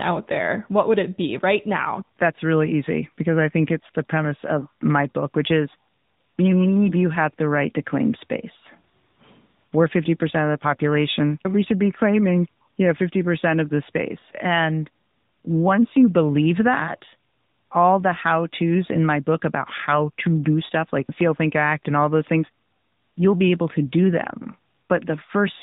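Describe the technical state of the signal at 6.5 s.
At 6.5 s the speech sounds boxed-in and telephone-like, with a plainly audible buzzy, synthetic edge, and this holds across the whole clip rather than just this moment. That is the AMR narrowband mobile codec. It samples at 8 kHz, so nothing above 4 kHz survives, and it rebuilds the voice from a vocal-tract model excited by a few pulses every 5 ms. The degree of roughness fits a mid-rate mode of around 10.2 kbps.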